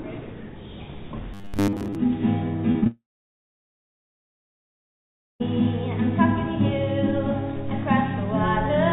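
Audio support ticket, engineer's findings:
Robotic sound from repeated short buffers, 1.34 to 1.95 s: steady 100 Hz metallic buzz, most of the stretch recycled, likely a starved playout loop repeating about 10 ms chunks.

Short concealed packet loss at 2.72, 2.80 and 2.84 s: three quick smears, each roughly 20 ms missing and patched by decoder concealment continuing the previous sound.

Long network dropout, 2.87 to 5.42 s: about 2.5 s of audio gone, brief concealment tail then near-silence, likely the stream stalling before resuming further on. The G.711 path has a hard 4 kHz ceiling.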